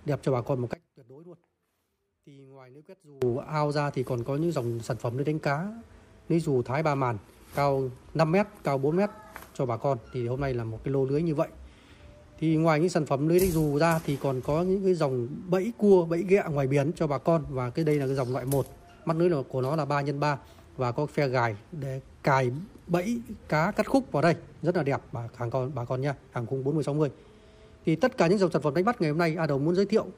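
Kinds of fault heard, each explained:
One channel inverted: from 0.74 to 3.22 s the sound drops by about 25 dB and turns faint, as if its centre has been scooped out. The likely cause is one stereo channel running with reversed polarity. When the two sides are summed to mono, everything they have in common cancels, and only the small difference between them remains. That leftover residue is all that survives for this stretch of the clip.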